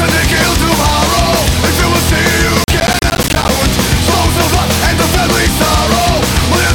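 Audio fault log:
2.64–3.49 s: processor overload crackle. For almost a second a gritty, tearing crackle rides on the sound and stops abruptly once the load clears. The processor falls behind its buffer deadlines repeatedly, and each missed block drops out to silence with hard edges on both sides. The spacing of the dropouts fits buffers of around 10 ms, and the density of the crackle suggests a few dozen misses.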